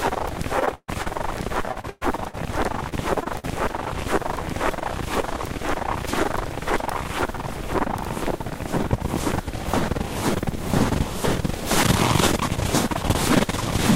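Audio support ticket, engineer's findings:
Repeated packet loss (robotic sound): 0.59–1.08 s (six gaps, longest 138 ms, ~46% concealed) and 1.71–2.35 s (four gaps, longest 116 ms). Jitter buffer repeatedly extending the last frame. Spectrogram shows smeared, frozen bands.

Short concealed packet loss: 2.89–2.93 s, 3.23–3.27 s, 3.39–3.45 s. Brief smears or wobbles where 20–40 ms dropouts were bridged. Waveform shows short repeated segments before real audio resumes.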